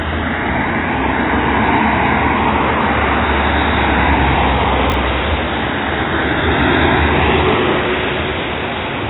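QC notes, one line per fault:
Throughout: AAC compression. Nothing is heard above about 3.9 kHz, so the sound is dull and smeared. Sustained parts warble and fizz where bands were dropped or filled with substitute noise. This is likely heavy AAC-LC coding at a low bitrate, near 16 kbps.
4.90 to 4.94 s: chunks out of order. One 20 ms chunk plays one chunk late, after the chunk that should follow it. Nothing is missing, but the order is swapped. The three hard joins give a brief jumbled moment.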